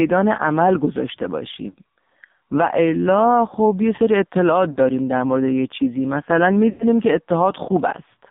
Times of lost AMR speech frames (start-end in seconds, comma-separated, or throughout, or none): 1.70-1.75, 4.72-4.78, 6.70-6.84